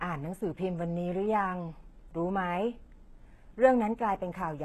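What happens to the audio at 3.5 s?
At 3.5 s, as throughout the clip, the speech carries likely HE-AAC compression: treble rebuilt from copied lower bands sounds gritty and lispy, with nothing above 12.3 kHz, fitting roughly 16 kbps.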